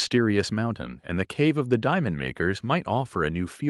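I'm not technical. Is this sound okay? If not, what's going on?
Yes, no faults to report.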